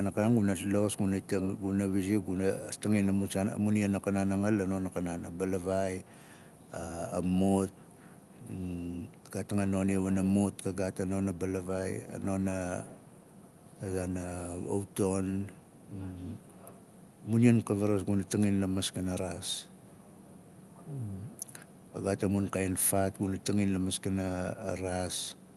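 Nothing in this speech goes wrong at any point; it comes across as a normal call, with the top end rolling off around 12 kHz, which fits an Opus call path running as expected.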